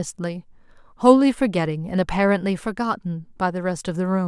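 A short bit of speech, and nothing in it sounds technically wrong at any point.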